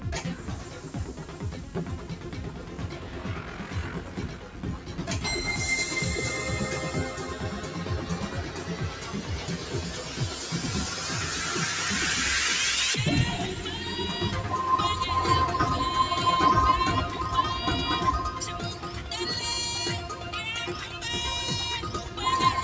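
A noise suppressor built for speech was applied to this music or everyday sound throughout, with its gain swinging by around 10 dB as it keeps deciding that sustained parts of the audio are noise. Attacks pass while held sounds and decaying tails are pulled down, so the level pumps and thins rather than holding steady. Sound is cut by the noise suppressor at 0.35 to 0.91 s, 1.08 to 1.75 s, 1.97 to 4.6 s, 4.78 to 5.01 s and 18.74 to 19.11 s, dipping by up to about 5 dB. The longest stretch, near 2 to 4.6 s, loses about two seconds of sustain. The others are short dips of a fraction of a second where steady material sinks and tails end early. The band stops at 8 kHz, from the call's microphone processing.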